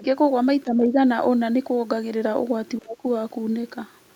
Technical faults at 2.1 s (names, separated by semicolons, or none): none